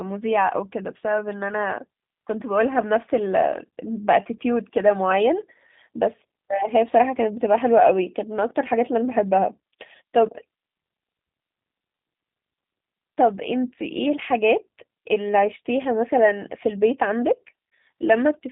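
G.729 codec damage runs throughout. The speech is rebuilt from a pitch predictor and sparse pulses within a band of roughly 150 Hz to 3.7 kHz, sounding rough, synthetic and plainly narrowband, consistent with an 8 kbit/s stream.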